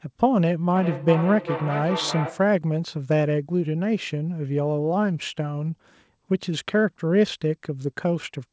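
Speech with a feedback echo between two devices from 0.75 to 2.53 s: words come back roughly every 0.4 s, peaking about 8 dB below the speech, as a second device replays the audio into the microphone.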